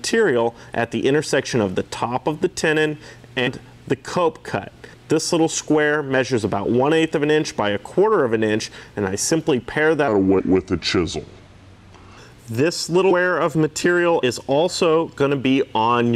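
The audio jumps forward at 3.46, 4.93, 10.38, 13.10 and 14.21 s. These are compressed frames skipped, dropping roughly 50 to 300 ms each, in steps that fit a frame of about 23 ms. From 10.08 to 12.18 s a section plays at the wrong speed, 0.79 times normal and about four semitones low, likely from playback against a mismatched clock.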